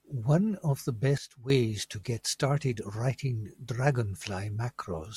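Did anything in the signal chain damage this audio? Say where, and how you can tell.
Yes: a sudden gain jump from 1.18 to 1.50 s drops speech and noise floor together by about 11 dB, a sharp-edged waveform step, likely unramped digital gain.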